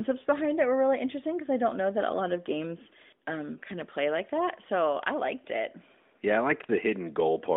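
This speech recording has no technical faults, and its band-limited telephone sound, roughly 200 Hz to 3.6 kHz, is what a normally working mobile speech channel produces.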